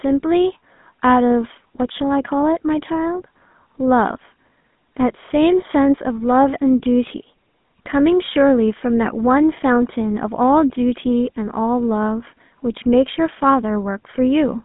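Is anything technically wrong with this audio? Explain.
Yes. The speech shows GSM full-rate codec damage throughout. Pulse-excited vocal-tract modelling, consistent with 13 kbit/s, adds plainly audible buzzy roughness, and nothing passes above 3.8 kHz.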